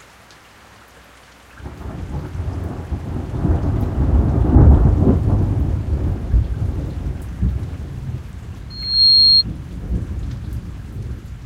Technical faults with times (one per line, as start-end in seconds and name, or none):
8.70-9.43 loudspeaker feedback squeal